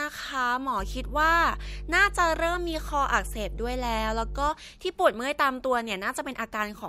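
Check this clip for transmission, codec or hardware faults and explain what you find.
One fault is present: mains hum from 0.79 to 4.49 s. A steady 50 Hz tone with low harmonics, fairly loud against the speech, comes from a ground loop or nearby transformer coupling the power line in. Its fixed pitch separates it from broadband rumble.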